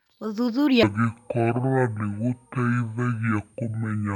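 A speech clip in which, from 0.83 s to the end, a section at the wrong speed plays at 0.529 times its recorded rate, so speech drags out to nearly twice its length and drops about ten semitones, turning deep and sluggish. The likely cause is playback or editing against the wrong clock. On a spectrogram, harmonics and formants shift abruptly lower at 0.83 s and stretch horizontally; the waveform's syllable envelopes widen correspondingly.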